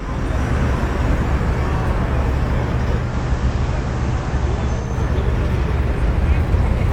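At 2.95 s you get digital radio blending to analogue: the receiver loses the digital stream and crossfades over about 224 ms to FM. The level dips about 1 dB, hiss sits roughly 25 dB down, and it blends back at 4.98 s.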